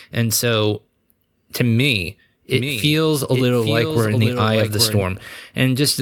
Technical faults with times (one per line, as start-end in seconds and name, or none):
2.54-5.02 doubled audio track